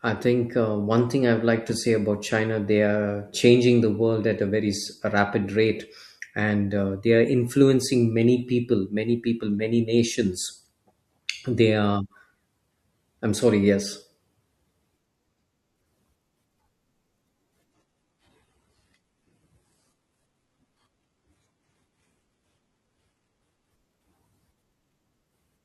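From 17.70 to 23.70 s the speech switches abruptly to an adaptive stream at a lower bitrate for six seconds. Codec artefacts rise, which fits a step down from 96 kbit/s AAC-LC to 16 kbit/s HE-AAC. Unlike a dropout, there is no gap, and full quality snaps back just as suddenly.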